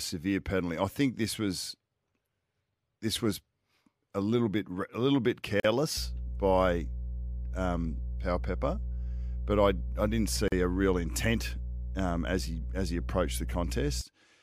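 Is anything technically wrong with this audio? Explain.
Yes, there are two kinds of fault.

There are two gaps at joins of encoded pieces, at 5.60–5.64 s, just after "bit a little bit", and at 10.48–10.52 s. Separately encoded pieces were joined without trimming the encoder's start delay and end padding. The speech drops out for about 45 ms and then 40 ms, with smeared edges, and resumes where it stopped.

Mains hum runs from 5.97 s, shortly after "bit a little bit", to 14.01 s. The 60 Hz power line is coupling into the signal through a ground loop or a nearby transformer. It is heard as a steady low tone with some low harmonics, loud enough to nearly match the speech.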